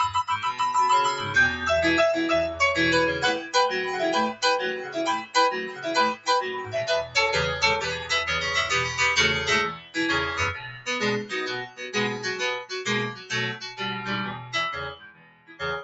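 A noise suppressor designed for speech stays active through the whole clip and treats sustained, steady content as background noise. It keeps pulling that content down, with the gain swinging by roughly 10 dB. Attacks pass through while held parts and tails sink, so the sound pumps and thins instead of holding an even level. The audio also comes through a call path with an Opus-style codec whose band stops at 8 kHz, which accounts for the missing top end.

The suppressor's deeper cuts fall on specific stretches. Between 4.33 and 7.15 s, about a second's worth of sustained sound is pushed down by up to about 13 dB. Shorter dips follow at 9.73–9.96 s (about 12 dB), 10.55–10.87 s (about 11 dB), 11.66–11.81 s (about 12 dB) and 12.63–13.8 s (about 11 dB). From 14.35 s to the end, the cut reaches about 14 dB. In each case the steady or fading part drops away or its decay is cut short.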